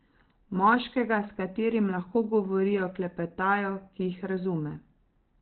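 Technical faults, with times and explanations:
Throughout, Opus compression: the speech sounds muffled and hoarse, boxed into a narrow telephone-like band with nothing above about 4.3 kHz, and its texture is heavily roughened. The likely cause is Opus running at a very low rate, which fits something near 12 kbps, where the encoder drops to its SILK speech mode at narrowband width, cutting the upper spectrum away and modelling the voice coarsely, which leaves this dull, gravelly quality.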